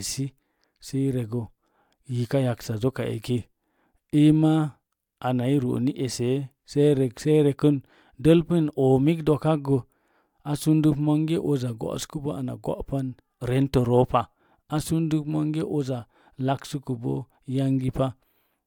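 No technical faults can be heard in this audio.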